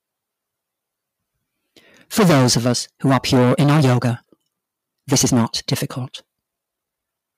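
From 2.63 s to the end, there's a time-stretched section: pace jumps to about 1.44 times faster at the same pitch, sounding rushed, likely from software squeezing it by dropping short pieces.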